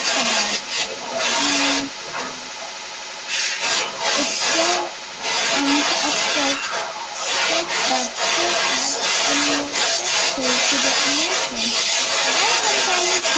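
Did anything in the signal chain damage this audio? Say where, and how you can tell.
Yes. A second voice leaks in alongside the talker from 0 to 13.37 s, sitting roughly 5 dB above the main speech. This is other side's voice leaking through, likely because the call's echo canceller left far-end loudspeaker sound in the microphone signal.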